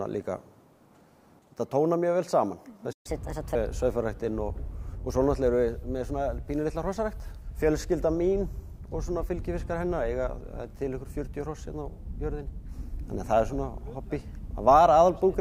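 At 2.92 s the sound cuts out abruptly in mid-flow and the output falls completely silent until 3.06 s, a gap of roughly 122 ms that reads as a hard dropout. This is a playback stall, likely caused by the player running short of buffered data or by its output thread being blocked, so nothing could be written to the device until it recovered.

Straight after the gap, from 3.06 s to 3.55 s, the sound runs noticeably fast and sits higher in pitch, by about four semitones. This is catch-up at higher speed: the player resamples its backlog to play at 1.25 times normal rate, which raises speed and pitch together, so it can win back the time lost in the stall.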